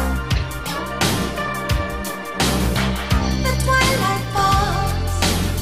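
No faults are audible anywhere in the clip.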